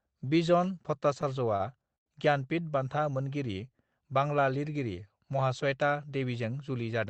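At 1.57 to 1.62 s there is a short stall from a late packet. A packet arrived late, so the sound is held about 30 ms too long. Nothing is lost.

At 1.96 to 2.08 s a call audio freeze follows. The sound buzzes briefly, then drops to about 100 ms of silence. Delayed packets likely emptied the jitter buffer. Speech resumes where it stopped.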